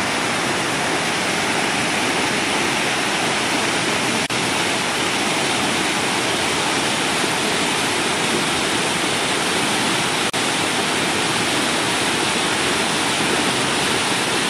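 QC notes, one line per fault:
4.26–4.30 s and 10.30–10.34 s, gap at a join of encoded pieces: the continuous sound drops out for about 35 ms and then 37 ms, six seconds apart, which fits segments encoded separately and spliced without trimming the encoder's start-up delay and last-frame padding. On a waveform, each is a flat stretch with smeared edges. A spectrogram shows a thin vertical blank band across all frequencies, and the sound resumes where it left off.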